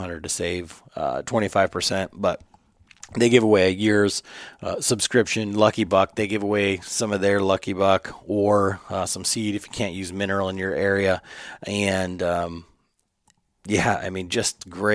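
Nothing goes wrong anywhere in this speech recording, so there's no fault to describe.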